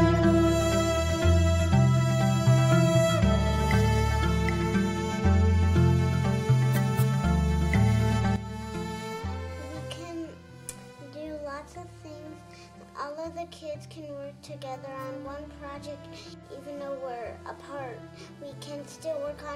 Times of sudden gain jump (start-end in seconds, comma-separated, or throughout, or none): 8.36-19.56